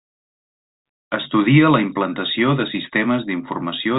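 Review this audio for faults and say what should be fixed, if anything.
No faults found; nothing needs fixing.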